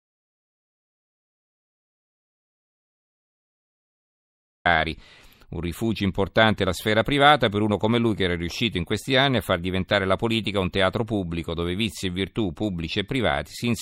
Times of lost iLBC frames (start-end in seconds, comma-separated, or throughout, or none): none